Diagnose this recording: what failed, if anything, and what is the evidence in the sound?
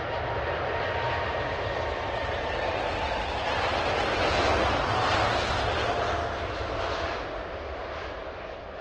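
The network stage failed: the connection slowed and the adaptive stream switched to a lower bitrate for a stretch. From 2.15 s to 6.15 s, four seconds in all, the quality abruptly drops, with codec artefacts rising. There is no gap at either switch, only sudden changes in quality, which fits the player dropping from Opus at about 64 kbit/s to about 16 kbit/s and then returning.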